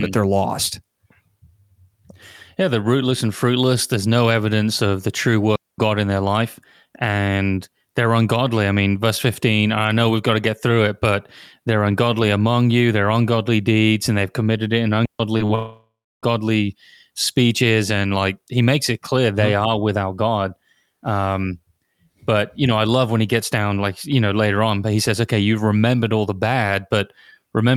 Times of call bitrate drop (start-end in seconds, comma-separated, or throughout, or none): none